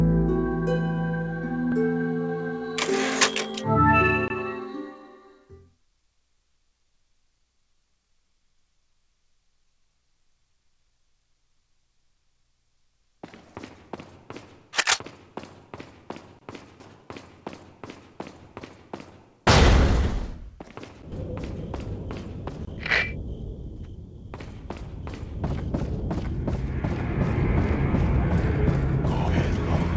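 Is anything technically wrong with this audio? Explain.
Yes. At 1.72 s, 16.8 s and 21.12 s the sound jumps ahead, losing roughly 40 ms, then about 100 ms twice. This is likely a dropped buffer (overrun): samples were overwritten before being read, so the surrounding audio is spliced directly together. The waveform shows an abrupt seam with no silent gap, and the spectrogram pattern cuts straight forward. The G.722 call path at 64 kbps, with nothing above 8 kHz, is separate from these faults.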